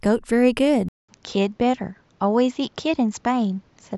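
At 0.89 s the speech drops out for 200 ms, then returns duller, with nothing above 7.6 kHz and a fresh noise floor about 40 dB down at much the same level: likely an input switched to a poorer device, not a mere filter.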